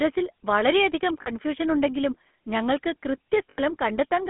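A speech recording carried through the GSM full-rate codec. Its buzzy, gravelly roughness fits 13 kbps full-rate coding, and a spectrogram shows nothing below 200 Hz or above 3.5 kHz. Lost GSM frames occur at 1.22–1.29 s and 3.50–3.59 s. The decoder repeats the last good frame, giving a metallic ring. On a spectrogram these appear as smeared, frozen harmonics, fitting two and four 20 ms frames.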